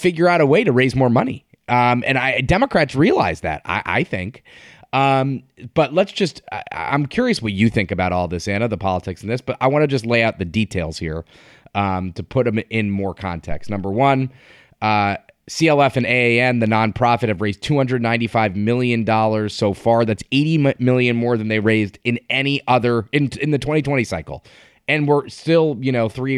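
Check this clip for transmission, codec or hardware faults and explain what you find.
One hardware fault is audible, a phantom power thump in this speech clip. Just after "put them in more", at 13.51 s, a deep thump cuts in, peaking around -14 dBFS and dying away within about 0.1 s, with a low tail lingering to 13.96 s. It comes from phantom power being switched on or off while the input was live. The sudden voltage step passes through the coupling capacitors and lands as a low-frequency pulse.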